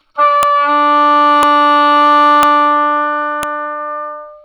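Right at 0.43 s there's a sharp, loud snap, and it comes back at 1.43, 2.43 and 3.43 s, a steady one-second spacing regardless of what the sound underneath is doing. That's a file header played as audio: the stream was built from one-second WAV pieces joined without stripping their headers, so those few dozen header bytes get read as sample values and burst out as a click at the start of each new piece.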